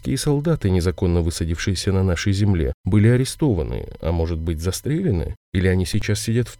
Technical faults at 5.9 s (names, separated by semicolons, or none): corrupt FLAC frame